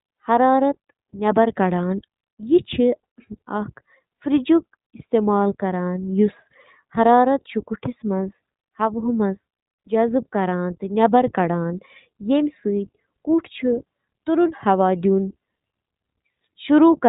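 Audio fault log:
Throughout: iLBC codec. Nothing above 4 kHz survives, so the speech sounds narrow and telephone-like. The damage is plainly audible, with a rough, slightly synthetic edge. Each frame is coded on its own, which fits 20 ms frames at about 15 kbps.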